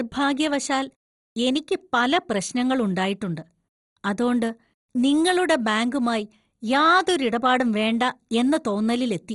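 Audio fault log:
throughout: MP2 compression, heavy. The speech sounds dull and has a gurgling, granular roughness, with nothing present above about 11.2 kHz. The damage is most likely from MPEG Layer II coding at a low bitrate, which fits about 56 kbps. That coder splits the signal into 32 sub-bands, and with too few bits to share it shuts off the top bands and quantises the remaining ones coarsely. Bands that drop in and out produce the warbling texture.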